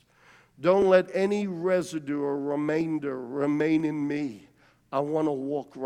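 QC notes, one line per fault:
0.82, 1.82, 2.81, 3.80 s: audio missing between chunks. Four tiny skips arrive about once a second, each losing only a few milliseconds. The speech on either side joins with no gap. The steady spacing likely comes from samples dropped at each 1-second chunk boundary.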